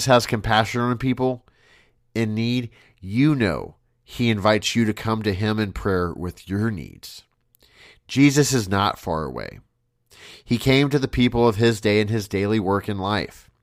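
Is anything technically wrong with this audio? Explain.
No, no technical faults here.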